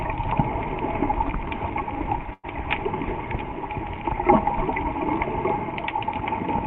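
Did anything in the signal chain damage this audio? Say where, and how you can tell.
Yes. A burst of packet loss on the network stage hits at 2.33 to 2.45 s. The last sound is stretched and fades for about 100 ms. Then about 40 ms of silence follows. Audio resumes with roughly 100 ms skipped.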